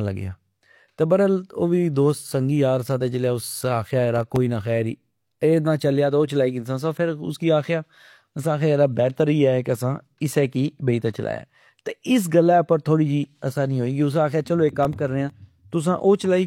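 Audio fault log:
4.16–4.36 s, processor overload crackle: a quick gritty burst riding on the speech, where the processor keeps missing its deadlines and replays stale audio in place of each late block. The blocks sound tiny, under a millisecond each, so all those hard-edged repeats blur into one tearing crackle.
14.69–15.30 s, processor overload crackle: same thing again, a longer stretch of grit, stopping once the load eases off.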